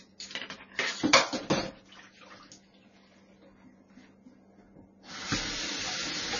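From start to finish the sound carries heavy MP3 compression artefacts. Nothing survives above 6.9 kHz, so the top end is dull, and weak detail flickers in and out, giving a watery, swirling texture, metallic chirps on bright noisy parts and smeared attacks. That is likely the result of a starved encoder, pointing to a very low bitrate of roughly 24 kbps. A spectrogram shows a flat ceiling at 6.9 kHz and speckled, blocky holes below it.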